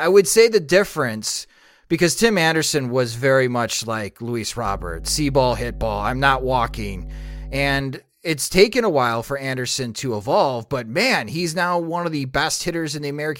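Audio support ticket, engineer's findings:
Steady low drone under the speech, 4.66–7.81 s, fairly loud, around 10 dB below signal. Mains hum at 50 Hz; ground loop or nearby transformer coupling power line in.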